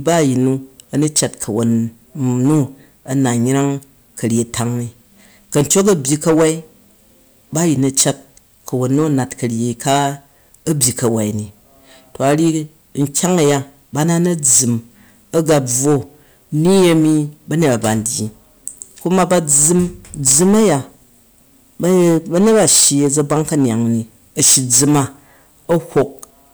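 Hard clipping runs through the whole clip: the speech reaches a stage driven about 18 dB past what it can pass, so a small share of samples are sliced flat. Those squared peaks add high harmonics, giving a harsh fuzz on every louder syllable.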